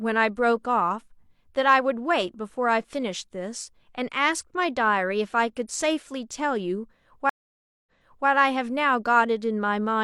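Speech with a stream reconnect at 7.29–8.28 s: 570 ms of silence, then playback resumes 418 ms earlier as a fresh decoder restarts mid-stream.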